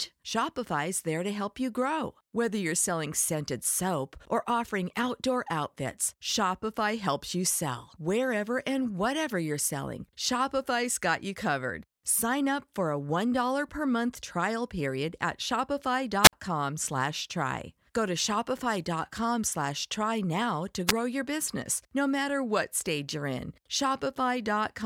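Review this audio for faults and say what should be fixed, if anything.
Hiss swells into a near-silent gap at 16.23–16.33 s (57 ms mute) and 20.87–20.93 s (under 1 ms): wireless microphone squelch dropout, a fading FM signal tripping receiver squelch.

Use a diversity receiver with clear line-of-sight antennas, keep the transmitter close, and choose an interference-free frequency.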